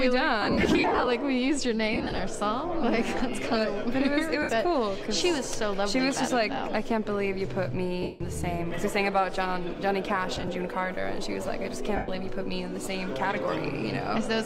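Lost LE Audio frames break up the sound six times: 0.42–1.07 s, 1.93–2.19 s, 4.42–4.49 s, 8.02–8.21 s, 10.35–10.48 s and 11.96–12.08 s. Gaps fitting 7.5 ms frames get filled with the last spectrum replayed with random signs, so tones smear into noise. The first two are scattered bursts, with runs around 50 ms and 30 ms. Under all this sits light codec coding that barely shows.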